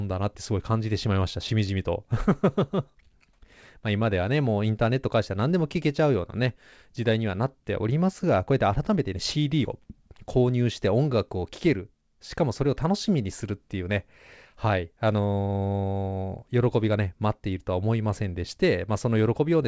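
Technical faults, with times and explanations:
The audio arrives over a call path that behaves as expected, with nothing above 8 kHz, as a wideband codec such as G.722 would give.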